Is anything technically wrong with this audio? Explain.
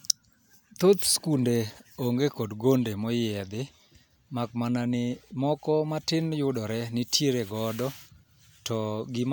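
No, nothing technically wrong is audible in this speech recording.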